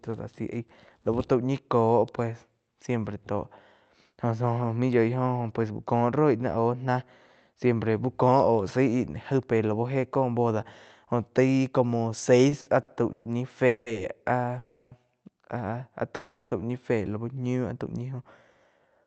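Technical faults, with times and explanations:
12.49–13.27 s, repeated stalls (stutter): four short gaps totalling 260 ms, longest 130 ms, fill about a third of the span; late packets repeatedly emptied the jitter buffer, and the receiver held the last sound until data arrived.
13.67–13.88 s, 14.58–14.93 s, 16.15–16.53 s, call audio freeze: the last sound is held as a fading buzz or hiss for 190, 330 and 360 ms, likely from packets delayed until the jitter buffer ran dry. Playback then resumes where it stopped, so delay is added but nothing is missing.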